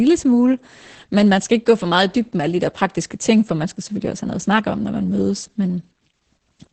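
Throughout the speech, Opus voice compression is heavy. Nothing sounds above 8.6 kHz, and the SILK coder's coarse excitation makes the voice hoarse and slightly robotic, which fits a bitrate near 10 kbps. That grainy texture is what sets it apart from plain low-pass filtering.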